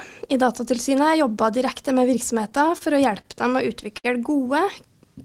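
From 2.50 to 3.26 s the audio shows repeated stalls (stutter): five brief holds, the longest 29 ms, as the jitter buffer kept running dry and the receiver extended the last sound. Nothing is lost, unlike packet-loss dropouts. At 3.98 to 4.06 s a single short stall from a late packet stretches one sound by 61 ms until the delayed packet arrives, then resumes from the same place.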